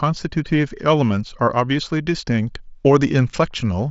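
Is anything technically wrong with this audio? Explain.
No, nothing technically wrong can be heard here.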